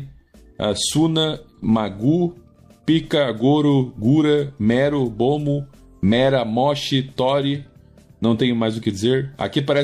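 No technical faults are audible.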